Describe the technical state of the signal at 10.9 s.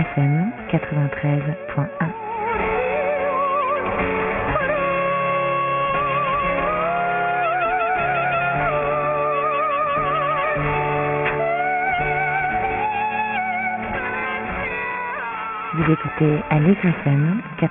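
At 10.9 s the audio shows aliasing, present throughout the clip. Content above 3 kHz was not filtered before the rate dropped, which fits a 6 kHz sample rate. It folds back to false pitches about 10 dB below the signal, sounding gritty and metallic.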